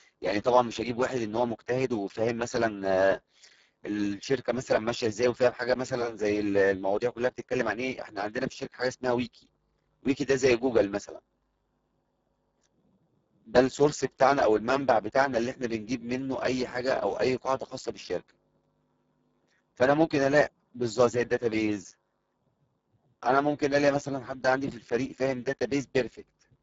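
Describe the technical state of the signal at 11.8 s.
At 11.8 s the speech carries Speex codec damage, present throughout: starved CELP excitation, pointing to a very low bitrate, makes it noisy and hoarse, with nothing above 7.7 kHz.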